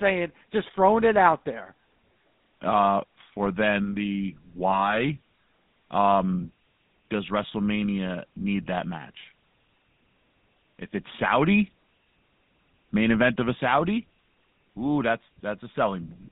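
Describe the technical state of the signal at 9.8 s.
At 9.8 s the speech carries GSM full-rate codec damage, as it does through the whole clip. The codec models the vocal tract and excites it with regularly spaced pulses. Only every third excitation sample survives. That gives a plainly audible buzzy, gravelly roughness. The band is cut to about 150 Hz to 3.7 kHz, so the top end is missing. The sound fits the 13 kbps GSM full-rate codec.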